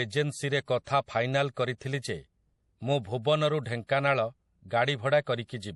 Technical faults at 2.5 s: MP3 compression

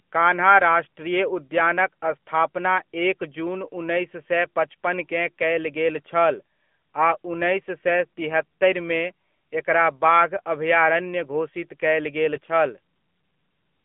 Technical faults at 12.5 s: AMR narrowband mobile codec; lost AMR speech frames

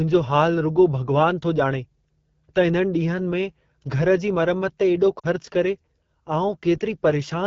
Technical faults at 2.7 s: AMR wideband (HD Voice) codec

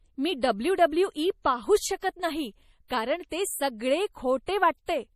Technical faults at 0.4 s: MP3 compression; pre-echo

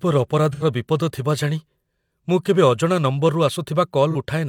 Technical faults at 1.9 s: none

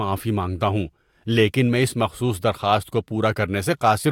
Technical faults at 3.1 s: none

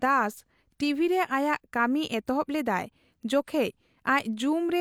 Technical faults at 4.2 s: none

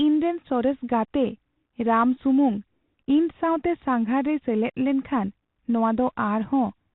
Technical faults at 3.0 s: Bluetooth CVSD headset codec; Bluetooth headset packet repeated

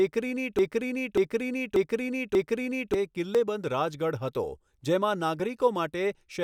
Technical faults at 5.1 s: none

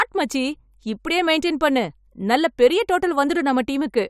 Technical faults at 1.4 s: none

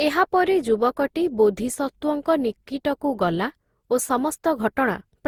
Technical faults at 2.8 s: generation loss

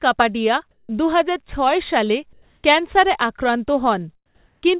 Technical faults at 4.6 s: comfort noise in place of the background

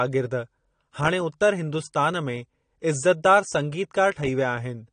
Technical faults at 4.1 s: AAC compression

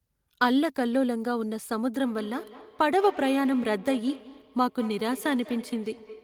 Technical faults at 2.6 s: feedback echo between two devices

